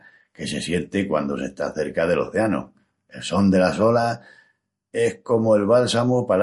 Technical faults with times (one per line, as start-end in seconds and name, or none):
0.00-6.42 MP3 compression